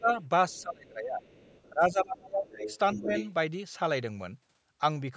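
Speech suppressed in double talk appears at 0.0 to 0.09 s, 0.59 to 1.27 s and 1.70 to 2.50 s: the voice drops sharply, at worst by roughly 25 dB, and thins or breaks up, likely because the echo canceller could not tell the talker from overlapping far-end sound. Another dip of about 10 dB comes at 2.95 to 3.11 s. The other side's voice leaking through is heard faintly, about 35 dB down, at 0.49 to 0.63 s and 1.27 to 1.69 s, then much more clearly, only about 10 dB below the speech, from 2.49 to 3.32 s, likely residual loudspeaker echo that the canceller left in the microphone signal.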